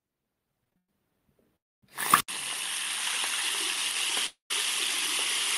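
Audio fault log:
0.64–0.89 s, repeated stalls (stutter): four short gaps, the longest 111 ms, stretch about 170 ms of held sound as packets arrive slowly and the buffer keeps emptying.
1.56–1.83 s, call audio freeze: the last sound is held and fades into 250 ms of silence, likely packets held up in transit, adding a 262 ms gap before playback resumes.
2.20 s onward, input switched to a poorer device: after an 80 ms silence the sound drops about 10 dB and loses everything above 11.4 kHz, likely a switch to a narrower-band input.
4.26–4.51 s, call audio freeze: the last sound is held and fades to 130 ms of silence, likely delayed packets emptying the buffer, inserting a 237 ms gap.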